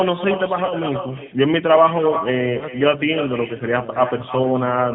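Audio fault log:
Throughout: echo with no canceller. Each phrase returns about 9 dB quieter, roughly 300 ms later, as a thinner copy. The far end's loudspeaker is feeding its microphone, and nothing subtracts that path before it travels back across the network.
Throughout: G.729 codec. Nothing is heard above 4 kHz, and the speech has a plainly rough, synthetic edge. This fits an 8 kbit/s G.729A coder, which rebuilds the signal from a vocal-tract filter, a pitch predictor and a few sparse pulses per frame.
0.65–0.75 s and 2.59–2.66 s: VoIP packet loss concealed by the speech codec. About 40 ms of signal drops out at the first point and about 20 ms at the second, which fits two packets and one packet missing. The decoder fills each gap by repeating its last pitch and filter state at falling gain, giving a brief buzzy or noisy, fading smear. The sound stays weak for a short while after each gap, because every frame is predicted from the one before.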